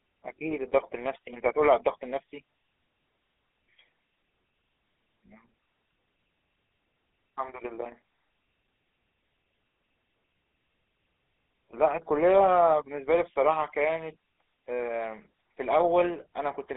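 From start to finish the speech carries the buzzy, gravelly roughness of the GSM full-rate codec, plainly audible and consistent with its 13 kbps rate. The codec rebuilds the voice from a vocal-tract model driven by a sparse, regularly spaced pulse train, so the excitation is coarse and the voicing grinds. That grain sets it apart from simple narrowband filtering: a 300 Hz to 3.5 kHz line alone would sound muffled and thin, but smooth rather than rasping.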